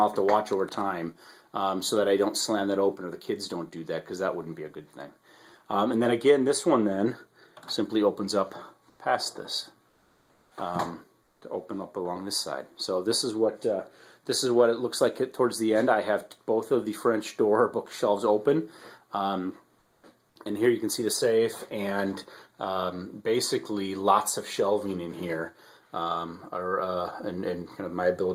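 At 8.89 to 8.99 s, 9.89 to 10.51 s, 11.23 to 11.41 s and 19.79 to 20.03 s, the background flattens into steady, featureless hiss, mostly about 3 to 5 dB quieter. This is comfort noise in place of the background, likely from Opus discontinuous transmission.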